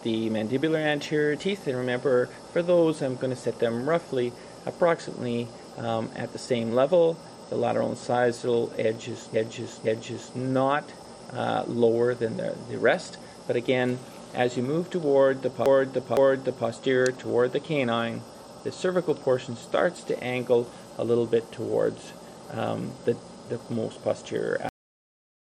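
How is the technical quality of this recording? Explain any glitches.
The recording has two stutters where a short block of audio plays again, and it ends abruptly.

Repeated frames occur at 9.34 to 10.37 s and again at 15.66 to 16.68 s. In each case a 512 ms block of compressed audio, likely a run of several frames, was written or delivered more than once, so the decoder plays it three times in a row. Each stutter adds about 1 s to the recording. On a spectrogram the same 512 ms pattern appears three times side by side. On a waveform the envelope shape repeats exactly.

The recording has a cut-off end at 24.69 s. The last buffers were never written out, so the audio stops in the middle of a sound. It drops straight to digital silence with no fade or natural decay. A waveform shows the signal ending at a hard vertical edge followed by a flat line. A spectrogram shows a clean vertical wall.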